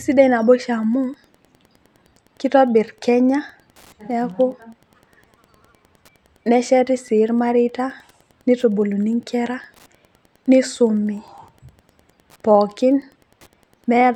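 A speech recording with Wi-Fi interference running through the whole clip. A faint, steady ticking sits under the speech, roughly ten ticks per second. The spacing is 102.4 ms, matching the beacon interval of a nearby Wi-Fi radio. The audio circuit picks up each radio burst and rectifies it into a click. The ticking is quiet, around 40 dB below the speech, so it is clearest in pauses.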